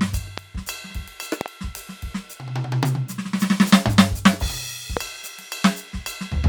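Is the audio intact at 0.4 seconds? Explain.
No, there's a loud pop from 0.38 to 0.40 s, a single sharp click standing well above the music, likely a voltage spike from a plug or switch, with the music carrying on underneath.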